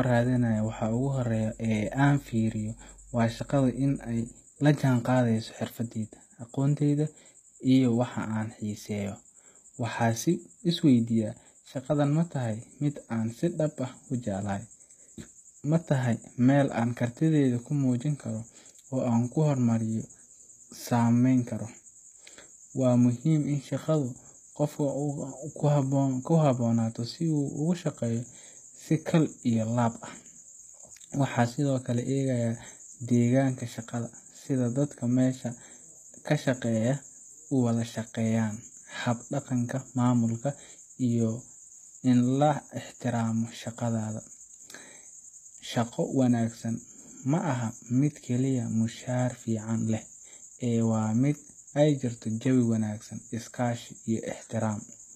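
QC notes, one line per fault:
Throughout, HE-AAC compression, likely: the speech's treble is rebuilt from copied lower bands rather than coded, so sibilants turn gritty and lispy with plainly audible damage, nothing above 14.9 kHz, and brightness that stays present but doesn't match the harmonics beneath, fitting a bitrate near 20 kbps.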